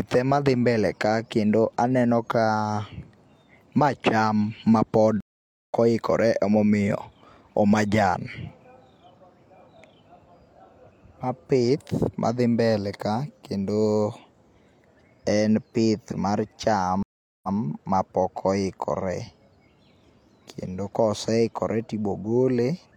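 Speech with two stream reconnects. After "ma cham mapod" at 5.21–5.74 s there is a flat 490 ms gap in the waveform, then "oikore ema omiyo o" resumes roughly 0.4 s further on. After "en pith mar cham" at 17.03–17.57 s a 404 ms blank spectrogram column is followed by a 139 ms repeat of the earlier audio. Each time a freshly started decoder joined the stream mid-flow.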